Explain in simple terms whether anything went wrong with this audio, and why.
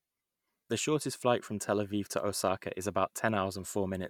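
Nothing went wrong here.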